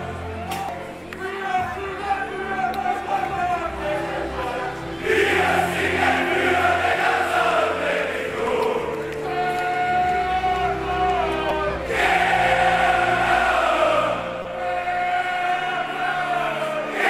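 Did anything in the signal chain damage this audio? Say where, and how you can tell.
Yes, at the codec stage. Brief glitches at 0.69, 4.43, 6.93, 11.49 and 14.42–14.45 s are damaged data in a compressed stream; the decoder misreads corrupted frames, then resyncs.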